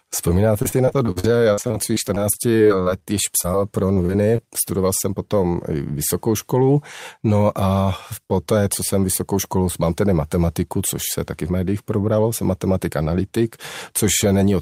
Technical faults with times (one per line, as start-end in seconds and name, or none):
0.59-4.40 repeated packet loss (robotic sound)
6.54-7.19 jitter buffer speed-up
11.43-12.19 jitter buffer speed-up